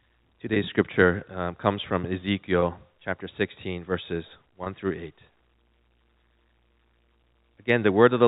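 Packet loss with pitch repetition occurs at 0.54 to 0.56 s, just before "scripture um comes from", again at 2.60 to 2.62 s, right after that phrase, and at 4.64 to 4.66 s. Each gap is about 20 ms, which fits a single lost packet. The receiver fills it by repeating the last pitch period, so each spot sounds like a brief buzzy hold on the speech. The telephone-band G.711 coding carrying the speech limits it to below 4 kHz.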